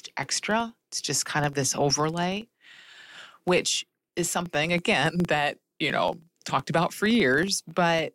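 A low, regular ticking buzz at about 21.5 Hz runs under the speech from start to finish and rises and falls with its level. This is a filter restarted on every block: it drops its state and begins each block from silence, leaving a small transient each time, which fits a 2048-sample block.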